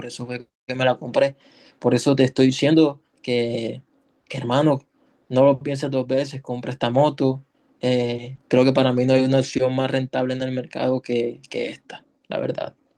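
At 8.35 to 8.39 s, short concealed packet loss: about 20 ms never arrived, and the receiver extrapolated the preceding speech to fill it, leaving a brief smear.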